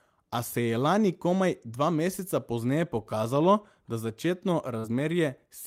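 Short concealed packet loss at 4.79 s, lasting to about 4.87 s: roughly 40 ms of the speech never arrived at the decoder in time, and the receiver covered the hole with about 44 ms of synthesised signal, extending the preceding sound from its pitch or as shaped noise before crossfading back into the real stream. It is heard as a brief smear or wobble near the end of the clip.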